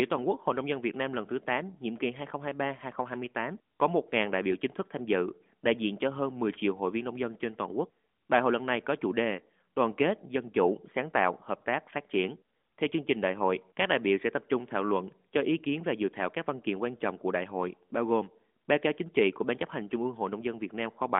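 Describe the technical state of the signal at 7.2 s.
At 7.2 s the audio is intact, with no fault present; the sound keeps the narrow telephone band of the AMR narrowband mobile codec, with nothing heard above about 3.6 kHz.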